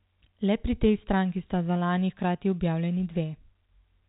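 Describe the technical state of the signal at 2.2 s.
At 2.2 s the signal is intact: the speech comes through with only the 4 kHz band limit of G.711 telephone coding.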